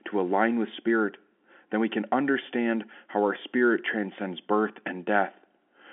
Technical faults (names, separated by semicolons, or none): none